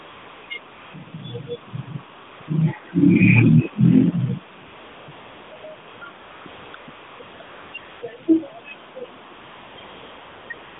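Right from 0 s and recurring through to the end at about 11 s, AMR comfort noise keeps stepping in: the phone decided the talker was silent, stopped sending speech, and the far end painted in smooth, steady synthetic hiss. It switches in and out, clustering densely between 4.7 and 8.0 s and again from 9.3 s, with gaps up to 0.66 s, while the narrowband phone band around it sounds lightly coded.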